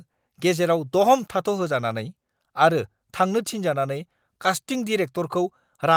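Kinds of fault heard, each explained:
Nothing stood out as a fault on listening to this speech recording.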